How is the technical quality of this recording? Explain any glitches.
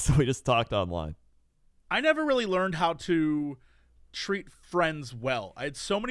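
Nothing in this speech recording stands out as a glitch, so there's really nothing here to explain.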